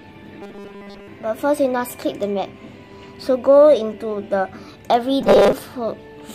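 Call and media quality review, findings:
Rigid metallic buzz at 200 Hz, 0.42–1.08 s and 5.21–5.53 s. Robotic sound from repeated short buffers, likely a starved playout buffer looping about 5 ms chunks. Repeats cover most of the first span and about half of the second, replacing real audio.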